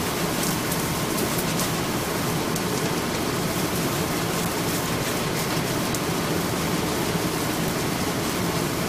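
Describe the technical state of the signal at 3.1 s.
At 3.14 s compressed frames are skipped: the audio jumps ahead by about 0.3 s, roughly fifteen 23.2 ms frames.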